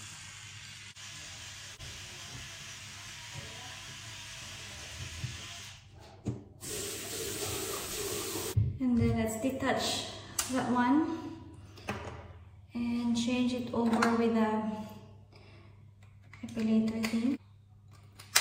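From 1.70 to 5.25 s there is crude rate conversion. Samples were dropped or repeated with no filter, which fits a 48 kHz to 44.1 kHz change. The error sits roughly 20 dB below the signal. It adds a gritty, inharmonic fizz that follows loud and high sounds.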